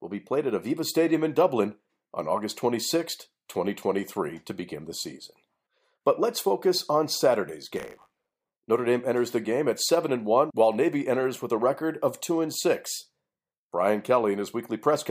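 From 7.75 to 8.56 s the speech takes on buffer tearing, a robotic 100 Hz buzz. The writing program and the playback hardware have drifted so their positions cross inside each period, which fits a 10 ms buffer. A small slice of every buffer, a few percent, replays audio from roughly 30 ms earlier, bounded by hard joins. A waveform shows step discontinuities every 10 ms, and a spectrogram shows evenly spaced vertical striations with a 100 Hz harmonic comb.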